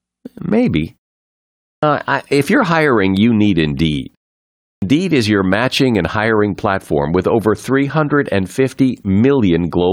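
Clipped start after a pause at 1.71 s and again at 4.70 s: after silences of 0.81 s and 0.63 s, the output device drops into a sleep state and needs time to wake and lock again, so the opening 116 ms and 121 ms of the next stretch of speech are swallowed. The speech jumps in abruptly out of silence, missing its initial sounds.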